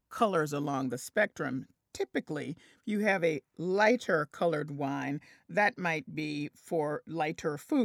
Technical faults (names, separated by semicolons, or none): none